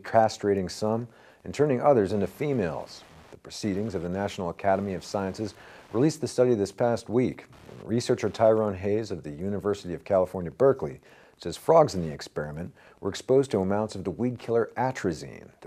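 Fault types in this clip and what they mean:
Wi-Fi interference: present for the whole clip, as a steady ticking about ten times a second sitting roughly 35 dB below the programme. A nearby Wi-Fi radio is sending its beacon every 102.4 ms, and some part of the audio circuit picks up that radio-frequency burst and rectifies it into the audio band. Each beacon therefore lands as a short click, and the fixed transmit interval gives the ticks their even rhythm under the sound.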